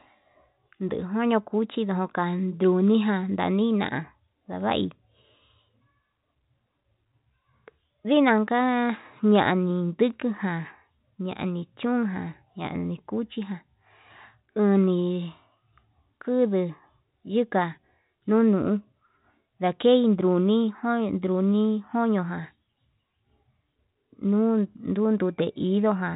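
Nothing stood out on listening to this speech; it carries the narrow sound of G.711 telephone coding, with nothing above about 3.8 kHz.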